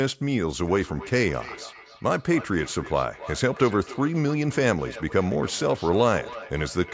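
From 0.67 s to the end of the speech, two devices in the same room are joined on one call, and one plays back what the other's microphone sent. That microphone picks the playback up again, and neither echo canceller removes sound from the other device, so a feedback echo between two devices forms. Each word returns about a third of a second later, thinner and ringing, peaking at about 16 dB below the speech, within the call's band that stops at 8 kHz.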